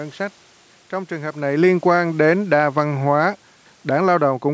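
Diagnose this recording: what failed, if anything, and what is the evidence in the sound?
From 1.48 s to the end, the speech and the room noise behind it sink in level together. That is automatic gain falling in the call processing: the gain control judged the input too loud, or its background noise too strong, and lowered its gain, separate from the talker shifting around 1.5 s.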